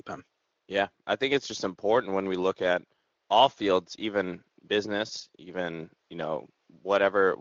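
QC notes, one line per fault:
No faults found in this speech clip. The room's background noise sits about 52 dB below the speech, and the light coloration from the Speex codec fits a fairly high bitrate.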